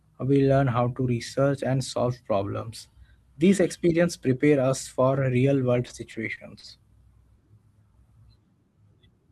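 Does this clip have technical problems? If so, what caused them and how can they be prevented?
Yes. Between 5.87 and 6.65 s the speech shows repeated stalls (stutter): packets arrived late, so the receiver's jitter buffer emptied four times, and each time it stretched the last sound to cover the wait, about 100 ms in total, none longer than 40 ms. Unlike packet loss, nothing is cut out; the speech simply hitches and drags. A larger or adaptive jitter buffer on a steadier network connection would prevent it.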